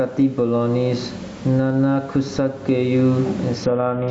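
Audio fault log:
Throughout, gain pumping: the gain ducks by around 15 dB under loud sounds, likely from input gain set far too high with a fast limiter clamping it. The waveform shows squashed peaks and a floor that breathes between them.
3.63 to 4.11 s, Bluetooth SBC bit pool drop: treble suddenly dulls and gritty noise rises until the clip ends, which fits the bit pool falling from 28 to 7, near 66 kbps. A spectrogram shows upper sub-bands going empty or speckled.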